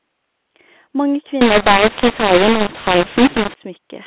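A speech clip in band-limited G.711 telephone coding. From 1.41 to 3.54 s a mu-law and A-law mix-up scrambles levels and floods pauses with noise, unlike clipping, which only flattens loud peaks.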